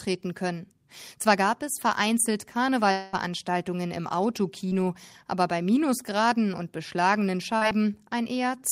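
A speech clip with three network faults. From 2.91 to 3.15 s, a long network dropout likely cut off about 220 ms of audio. The receiver fills the whole gap by extending the last sound into a fading buzz or hiss before speech resumes with that portion missing. Short concealed packet loss occurs at 4.69 to 4.73 s, losing about 20 ms, and at 7.57 to 7.63 s, losing about 40 ms. Each hole is patched from the preceding sound and heard as a brief smear or wobble.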